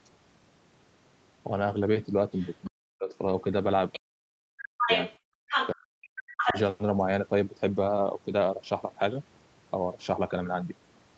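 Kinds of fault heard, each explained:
Other side's voice leaking through: A second, quieter voice surfaces in scraps near 2.3 s and 3.9 s, then reaches the talker's own level from 4.8 to 5.7 s and 6.4 to 6.6 s, likely loudspeaker echo the canceller missed. Spectrograms show a second, overlapping harmonic set.
Speech suppressed in double talk: While the other voice plays, the talker's level drops in pieces by roughly 40 dB at worst, around 2.7 to 3.1 s, 4.0 to 4.9 s and 5.7 to 6.6 s, likely from the canceller turning both down. The waveform shows chopped gaps and the spectrogram shows blank patches.
Background gated by the echo canceller: From 5.19 to 5.44 s the room sound falls by about 34 dB as the canceller clamps the microphone during loudspeaker playback, then returns. On the waveform the noise floor flattens to near silence, and the spectrogram's background wash briefly vanishes.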